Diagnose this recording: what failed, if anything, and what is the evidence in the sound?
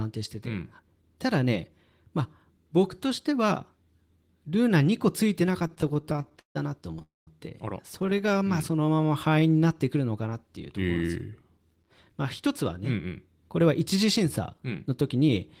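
Repeated stalls (stutter) at the network stage: packets kept arriving late, and the jitter buffer repeatedly ran dry. From 5.59 to 6.57 s, about twenty gaps (the longest 150 ms) were filled by extending the last sound, covering about 37% of that stretch. From 7.95 to 8.37 s, about ten gaps of up to 11 ms do the same. The sound drags and catches rather than dropping out.

Call audio freeze from 7.02 to 7.29 s, likely a packet hold-up that emptied the jitter buffer. The last sound is carried on and fades, leaving about 170 ms of silence before the audio resumes where it stopped. That adds roughly a quarter-second of delay.

Jitter buffer slow-down from 8.47 to 9.86 s: the receiver was rebuilding its reserve, repeating single pitch periods and bits of pauses. Playback runs at 89% speed with unchanged pitch, stretching the passage by about 165 ms into drawn-out sounds.

Jitter buffer speed-up from 11.71 to 13.07 s and again from 13.60 to 15.29 s: the buffer held more than its target, so the receiver trimmed short pitch-period pieces. 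Each stretch runs at 107 to 108% speed, removing about a tenth of a second and sounding hurried.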